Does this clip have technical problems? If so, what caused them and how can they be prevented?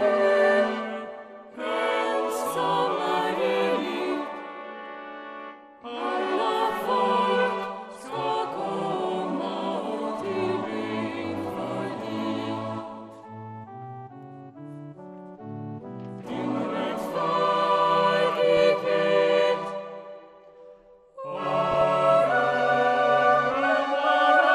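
Yes. Throughout, the sound is dull, with a gurgling, granular edge as upper frequency bands flicker in and out. This is likely MP2 compression with too few bits, which switches off the highest sub-bands and coarsely quantises the rest, consistent with roughly 80 kbps. Encoding at a higher bitrate would prevent it.

Short bursts of noisy blips break through at 18.57 to 18.64 s, 21.69 to 21.82 s and 23.51 to 23.54 s. This is DAB burbling: a small fraction of bit errors slipped past error correction and corrupted samples and scale factors, so single sub-bands got short blips of noise or jumped in level for up to a frame. Better reception, with a stronger signal or a better-placed antenna, would prevent it.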